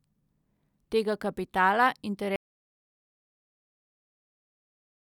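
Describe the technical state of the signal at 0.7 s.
Nothing is wrong at 0.7 s; the speech signal is intact at that point, with no dropout, distortion or other technical fault audible.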